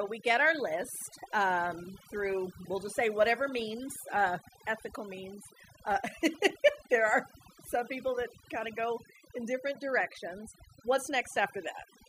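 From start to finish, the speech shows overdone noise removal: a noise reduction stage was set far too aggressively for a noisy recording. Each frequency band that drifts close to the tool's noise estimate gets pushed down hard or switched off, and softer parts of the voice fall below that line and vanish along with the noise. The gaps between phrases collapse into near silence dotted with twinkling specks.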